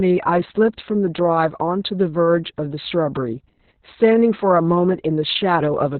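Opus voice compression runs throughout: nothing above 4.4 kHz, and speech turns hoarse and robotic, which fits SILK near 6 kbps. Plain band-limiting would stay clean.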